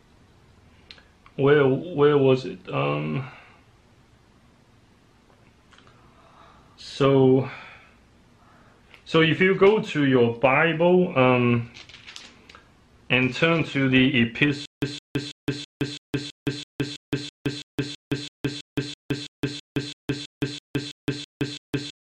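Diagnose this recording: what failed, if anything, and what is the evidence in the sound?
At 14.66 s the sound falls into a stutter with silent gaps that lasts to the end. A burst of about 162 ms repeats every 329 ms, with about 167 ms of digital silence between repeats. The same fragment returns each time, so the audio after 14.66 s never plays. This is a playback-stage failure, likely a stalled stream or player buffer. Each retry replays the last fragment it holds, then runs dry.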